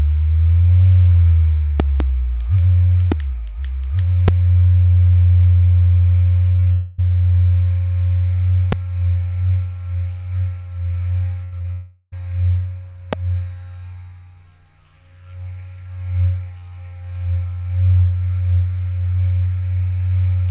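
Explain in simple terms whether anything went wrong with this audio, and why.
Loud pops occur at 1.80 to 2.03 s (two pops close together), and single pops at 3.12, 4.28, 8.72 and 13.13 s. Each is a sharp jolt sitting on top of the sound, which carries on underneath. The likely cause is a sudden electrical pulse from a plug, switch, static or driver glitch.

Repeated packet loss (robotic sound) runs from 6.52 to 6.68 s. Four short gaps, none longer than 20 ms, came close together, and each was patched by stretching the last bit of sound. About half of that stretch is patched, so it sounds choppy, with pieces missing.

Long network dropouts follow at 6.72 to 7.00 s and 11.72 to 12.14 s, lasting about a quarter second and about four tenths of a second. The audio likely stopped arriving, so the receiver kept extending the last sound as a fading buzz or hiss. The sound then resumes further on, with that part lost.

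A burst of packet loss hits at 11.44 to 11.54 s, removing about 80 ms in a row. The receiver held the last sound and turned it down, so it turns into a brief held buzz or fading hiss before the audio picks up again.

Short concealed packet loss follows at 11.58 to 11.62 s and 11.62 to 11.66 s, each a 20 ms hole. Each is filled in with a continuation of the preceding sound and blended back, which is heard as a tiny smear or wobble.

The sound also lacks anything above 4 kHz, as is normal for a standard phone-call codec.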